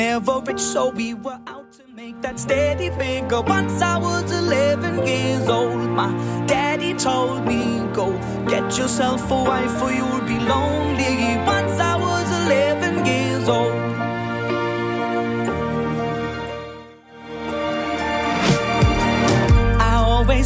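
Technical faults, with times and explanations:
Nothing stood out as a technical problem on listening.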